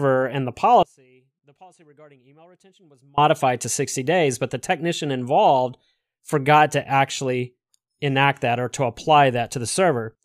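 At 0.83 s, right after "and the", the speech cuts off abruptly and stays gone until 3.18 s, a gap of about 2.3 s that holds only a faint trace of the sound, roughly 30 dB below its normal level, before the speech snaps back mid-flow. This is an audio dropout to a faint residue. The likely cause is the wanted signal being lost for that stretch while the path after the break stayed live and passed through only that weak leak.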